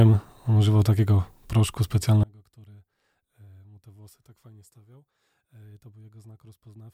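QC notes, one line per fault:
2.24 to 6.94 s, one channel inverted: summed to mono the speech drops about 30 dB to a faint trace, likely from reversed polarity cancelling centred sound.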